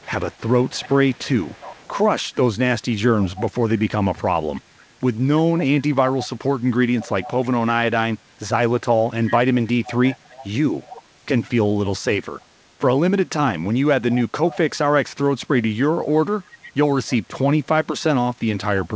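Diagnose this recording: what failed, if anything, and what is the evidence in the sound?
Call processing failed, with an echo leak. A quieter copy of the speech trails it by 317 ms. It appears at 0.0–1.91, 3.23–4.61, 5.59–7.48, 9.27–11.02, 12.40–12.45, 14.10–14.58, 16.44–17.16 and 18.84–18.88 s, roughly 15 to 35 dB down. The far end's echo canceller likely passed its loudspeaker pickup back.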